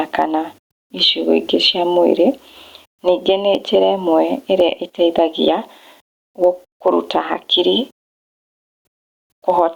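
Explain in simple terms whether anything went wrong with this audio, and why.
Gain pumping runs through the whole recording. The level is pulled down on every loud sound, swinging noticeably, so loud and soft parts end up squashed closer together. Unlike steady hiss, it breathes in time with the speech, likely from the level being set too high and then automatically squashed.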